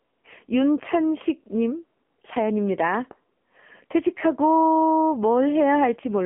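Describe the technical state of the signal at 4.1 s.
Thin, buzzy and synthetic speech with nothing above about 3.6 kHz, from AMR narrowband mobile codec coding across the whole clip; the heavy damage fits a low 6.7 kbps mode.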